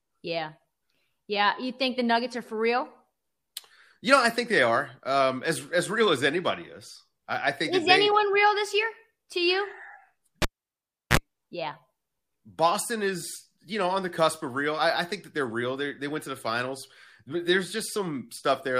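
At 10.42 s the cable is pulled and plugged in: a vertical pop, 0.7 s flatline, 37 ms of 60 Hz buzz harmonics, another pop at 11.17 s.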